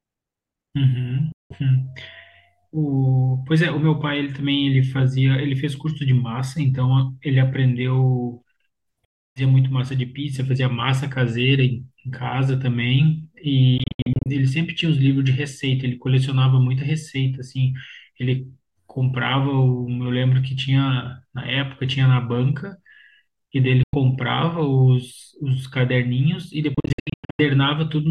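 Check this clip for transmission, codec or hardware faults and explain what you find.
Five short silences break up the speech, most likely Bluetooth dropouts: 1.32 to 1.62 s, 9.05 to 9.42 s, 13.78 to 14.27 s, 23.83 to 23.95 s and 26.74 to 27.40 s. Late packets were discarded, so output stopped abruptly. The two later long ones stutter in gaps under 100 ms. Speech resumes as if it had kept playing.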